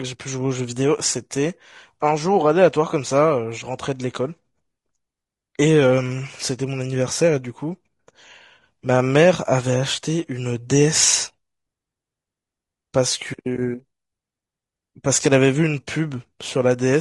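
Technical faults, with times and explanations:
Throughout, low-delay AAC compression: the speech is plainly rough and grainy, with a noisy fill between the pitch harmonics and a top band that sounds thin and synthetic rather than airy. This is likely AAC-ELD at a starved bitrate, with the damage level fitting something near 32 kbps. Its short frames cannot separate closely spaced harmonics, so the energy between them smears into noise, and the scarce bits leave the upper frequencies coarsely rebuilt.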